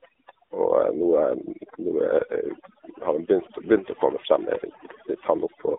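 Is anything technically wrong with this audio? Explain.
Yes. Two faults run through the whole speech clip.

Overdone noise removal is present from start to finish. The noise reducer was pushed too hard, so it shuts off individual frequency bands near its noise estimate, and quiet parts of the voice get cut along with them. What's left is near-silent gaps with twinkling specks.

An AMR narrowband mobile codec also runs throughout, with audible damage. That's AMR-NB at 7.4 kbps, and the band sits roughly between 300 Hz and 3.7 kHz, with nothing above 3.8 kHz. At that bitrate the pulse-driven vocal-tract model sounds buzzy and synthetic.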